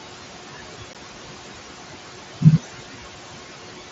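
Noise suppressor artifacts run through the whole clip. The room noise, about 13 dB under the speech, drops by about 17 dB in the pauses and rises again under the speech.

At 0.93 s there is unconcealed Bluetooth headset packet loss. A 15 ms hole with abrupt edges cuts into the speech. It fits two lost packets.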